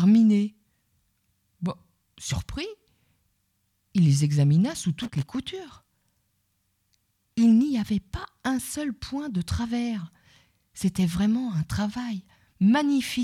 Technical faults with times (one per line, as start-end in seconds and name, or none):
4.99-5.35 loose connector crackle